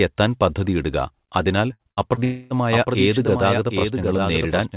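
Just after "എത്താൻ പദ്ധതിയിടുക അതിനാൽ", from 1.73 to 2.24 s, the speech turns choppy and metallic: repeated packet loss (robotic sound). Four short holes, the longest 62 ms and about 150 ms in all, are each patched by stretching the preceding sound, so roughly 29% of that half-second is synthetic. A single dropout would be one continuous gap. Here the damage comes as a rapid run of brief repairs between surviving fragments.

It runs straight into a long network dropout from 2.24 to 2.56 s. About 0.27 s of audio never arrives, and the whole stretch is filled with a smeared continuation of the last sound rather than going quiet. That gives a buzz that fades, with no real speech behind it, most likely from a longer network outage. Unlike the preceding choppiness, there is one unbroken hole and no fragments of speech getting through.

From 2.70 s to the end, a doubled audio track appears. A full copy of the speech, about 5 dB quieter, trails roughly 0.7 s behind the original, likely picked up a second time through a slower path. 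It is not room echo or reverb. The copy has no decay or room colour, repeats only once, and starts abruptly. Both copies share the call path's band limit, with nothing above 4 kHz, which points to a G.711 mu-law stream.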